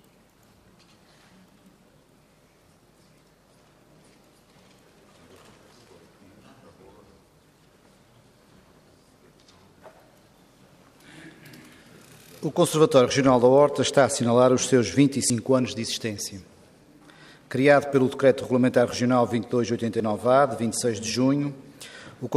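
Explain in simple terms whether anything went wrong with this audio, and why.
Something did go wrong, three times. At 15.3 s, 17.28 s and 20.0 s the sound jumps ahead, as if a tiny piece was cut out. There is no gap of silence. The two sides are just stuck together. The lost pieces are very short, about 40 ms at the first two and about 20 ms at the last. This is likely a dropped buffer (overrun). The recording software fell behind and missed some audio before it was overwritten.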